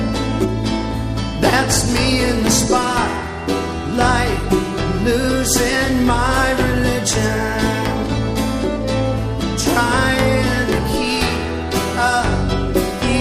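No technical fault can be heard anywhere in the audio; the signal stays steady and intact throughout.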